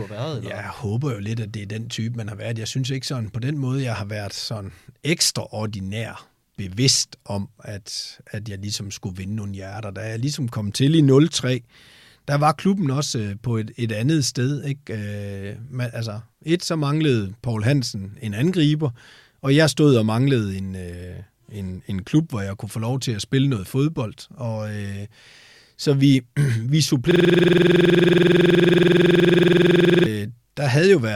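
Speech clip that hits a system hang loop from 27.11 s to 30.06 s. The same 46 ms slice keeps repeating at 21.5 Hz, a buzzy stutter that fits a 2048-sample buffer the hardware kept cycling after a freeze.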